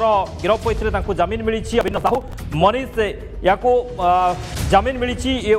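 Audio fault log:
1.81–2.33 s, processor overload crackle: for about half a second the sound turns gritty and torn, like a burst of crackle laid over it, then clears up once the load drops. The processor was falling behind and missing buffer deadline after deadline, dozens of them in a row. Each missed one got skipped outright, leaving a tiny hard-edged hole. The spacing points to buffers of around 10 ms, which is why the holes run together into that fast, rough texture.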